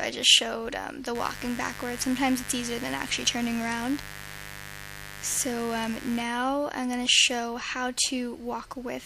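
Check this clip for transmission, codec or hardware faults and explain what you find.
A mains buzz is present from 1.15 s to 6.23 s. Sharp switching spikes, arriving twice per 50 Hz cycle, are leaking into the signal path, so harmonics of 50 Hz extend well into the kilohertz range. The result is a steady, raspy buzz sitting roughly 15 dB below the programme.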